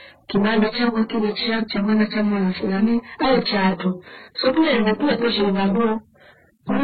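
From start to finish the speech is affected by hard clipping. The level is driven about 23 dB past what the signal path can carry, so nearly a third of the samples hit the ceiling and are sliced flat. Every loud sound comes out as harsh, buzzing fuzz instead of occasional crackle. On a waveform the trace looks like a solid slab with squared-off tops and bottoms. A spectrogram shows dense harmonic smearing spreading upward from each loud sound.

Running alongside this for the whole clip, the sound has a muffled quality with several kinds of codec damage layered together. Nothing remains above 4.5 kHz. The likely cause is transcoding between lossy codecs, a chain that fits a very low-rate AAC stage followed by MP3 and then HE-AAC. Each pass kept the earlier damage, added its own, and carried the lowest bandwidth limit forward. On a spectrogram the top edge is a hard shelf at 4.5 kHz, and below it the energy is broken into blocky, patchy time-frequency fragments.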